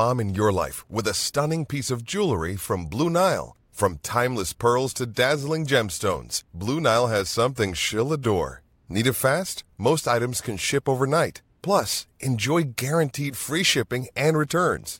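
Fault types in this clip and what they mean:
No technical faults are audible in this recording.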